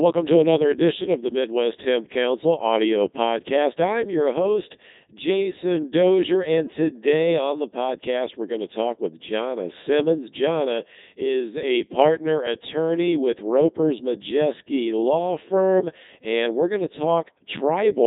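Throughout the speech, a Codec 2 vocoder replaces the waveform with resynthesised sine waves built from pitch, voicing and envelope, giving robotic, buzzy tones with nothing above 3.9 kHz. That fits its 3.2 kbit/s mode and differs from waveform codecs' warbling smear.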